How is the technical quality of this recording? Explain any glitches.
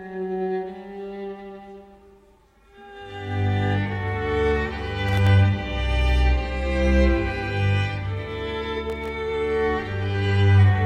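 Two short bursts of processor overload crackle mar the audio, at 5.09 to 5.30 s and 8.90 to 9.09 s. In each, the processor repeatedly misses buffer deadlines, consistent with buffers under a millisecond long. Around ten drop to silence with hard edges, heard as gritty crackle.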